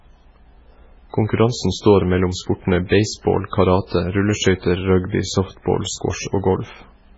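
MP3 compression artefacts run throughout: nothing above 7.6 kHz, with watery, swirling treble and smeared consonants, likely from a very low bitrate that starved the encoder.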